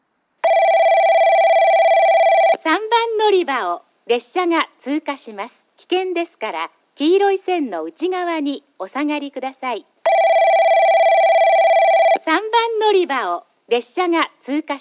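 No technical faults can be heard anywhere in the audio. Nothing in the sound points to a problem in how it was captured or delivered.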